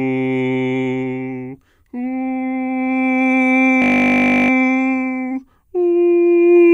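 From 3.82 to 4.50 s the music gives way to a system hang loop: playback stalled while the output hardware kept replaying one 20 ms buffer, 34 times over. The short cycle fuses into a steady 50 Hz buzz, and the music resumes with essentially nothing skipped.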